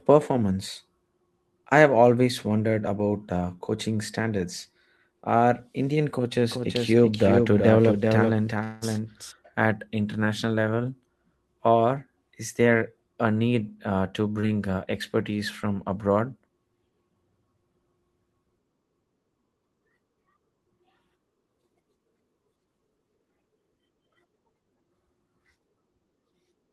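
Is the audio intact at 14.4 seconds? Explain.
No. From 14.32 to 14.37 s a sound is held too long with a faint buzz, a short stall from a late packet: the jitter buffer emptied, about 28 ms was stretched, and nothing was lost. Then, from 14.41 to 14.44 s, just before "uh expertise from abroad", a brief smear marks short concealed packet loss, where 20 ms never arrived and was filled by continuing the previous sound.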